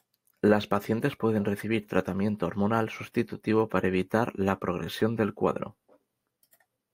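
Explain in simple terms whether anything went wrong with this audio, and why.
Nothing went wrong here: no dropouts, glitches, distortion or other playback faults are audible anywhere in the speech.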